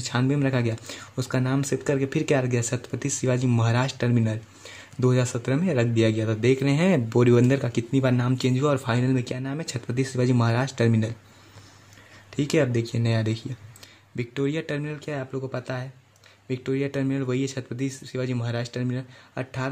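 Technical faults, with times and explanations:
9.32–9.67 s and 13.84 s to the end, one channel drops out: the sound abruptly falls by about 6 dB, first for roughly a third of a second and then again for the rest of the clip, with level jumping straight back between the two dips. The likely cause is one side of a stereo feed going silent. Folded to mono, material shared by both sides loses half its contribution, and anything carried only on the missing side vanishes outright.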